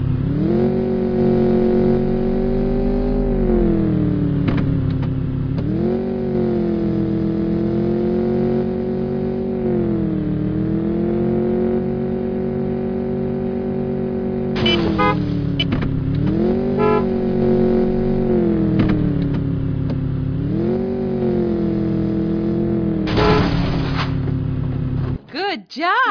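No technical faults can be heard anywhere in the recording.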